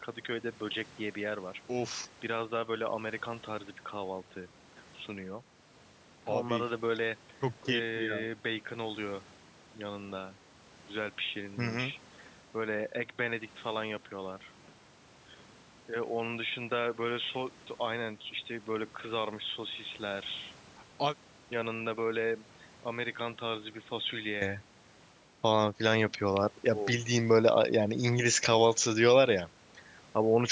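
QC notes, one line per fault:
0.0–24.4 s, input switched to a poorer device: the speech sounds dull and boxy, narrower in band, about 10 dB quieter, with a faint new noise floor, likely from a narrower-band microphone. At 24.4 s it opens up to 8 kHz with no gap.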